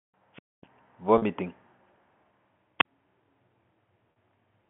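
Speech over a phone line, with the usual narrow band of roughly 150 Hz to 3.4 kHz from G.711 coding, and two kinds of trouble. There's a wireless microphone squelch dropout at 0.33 to 0.66 s, a hiss swell and then about 250 ms of dead silence, and a shorter one at 2.79 to 2.85 s with a roughly 40 ms hole, both from the radio signal fading until the receiver muted. Then there's packet loss with pitch repetition at 1.18 to 1.22 s and again at 4.12 to 4.16 s. Each time about 40 ms went missing, which fits two 20 ms packets, and the decoder looped the last pitch period, so you hear a brief buzzy hold.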